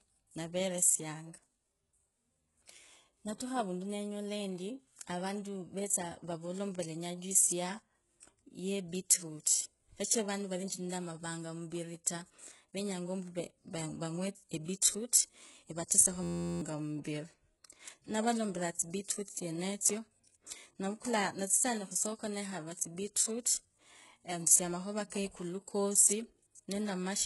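All the way through, the treble is gritty and lispy and stops dead at 11.5 kHz: likely HE-AAC compression, heavily squeezed, pointing to something near 12 kbps. From 16.23 to 16.61 s there's a system hang loop, an 11.61 ms chunk repeating as a steady 86.1 Hz buzz, which fits a 512-sample buffer, with roughly 0.4 s of real audio gone. Then at 22.75 to 22.79 s a brief pre-echo: codec noise smears about 38 ms ahead of an attack, so a short hiss leads it in.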